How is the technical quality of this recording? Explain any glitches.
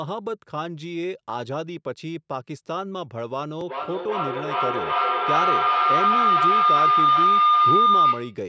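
The recording's technical quality falls apart about halfway through because of feedback howl. From 3.68 s to 8.47 s, two devices on the same call in one room keep passing the sound back into each other with gain on every trip. It swells into a tone near 1 kHz, with the loop repeating roughly every 400 ms, and peaks about 10 dB above the speech. The call's normal processing also leaves nothing above about 8 kHz.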